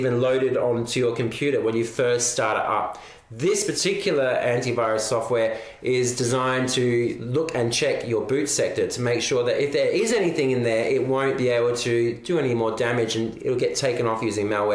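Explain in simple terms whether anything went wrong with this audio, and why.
Nothing went wrong here.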